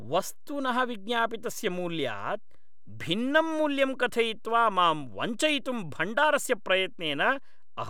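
Right from the start and all the way through, the speech sits on a DC offset: the whole waveform is pushed off the zero line by a fixed amount, about -38 dBFS. You won't actually hear it as a sound, since it's a constant, not a vibration. What it does is eat a little headroom on one side of the waveform and show up as a steady lump of energy right at the bottom of the spectrum.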